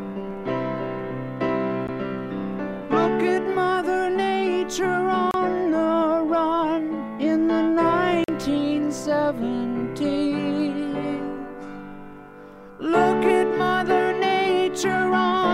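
Packets most likely failed to reach the headphones in time over a Bluetooth link and were discarded, producing a Bluetooth dropout three times. The output goes abruptly silent at 1.87 s for about 14.5 ms, from 5.31 to 5.34 s for 29 ms, and from 8.24 to 8.29 s for 43.5 ms. These gaps are whole multiples of 14.5 ms, which points to one, two and three lost packets. After each gap the sound resumes further along, as though it had kept playing.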